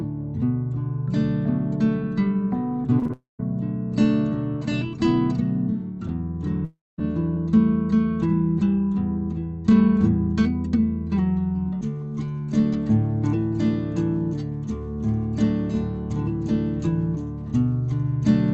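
Around 2.99 to 3.11 s there are three short concealed packet losses back to back, at 2.99–3.03, 3.03–3.07 and 3.07–3.11 s. Each drops about 20 ms, and the receiver papers over it by extending the preceding sound, so you get a quick smeary wobble rather than a clean gap.

Right after, from 3.13 to 3.41 s, the sound trails off into a fading buzz and then goes silent for about 0.15 s before returning, with that stretch simply missing. This is likely a long network dropout. The same thing happens again from 6.65 to 7.00 s: a roughly 0.34 s hole, concealed at first, then about 0.22 s of silence. That one is likely a long network dropout as well. Both sit on top of the call codec's usual band limit at 8 kHz.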